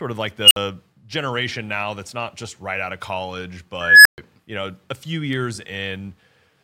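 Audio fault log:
0.42–0.56 s and 3.81–4.18 s, unstable filter: a high tone near 3 kHz, then one near 1.5 kHz, swells to a clipped squeal over 86 ms and 241 ms, then drops to silence for 55 ms and 128 ms. A recursive filter's feedback ran away until its values overflowed and it reset.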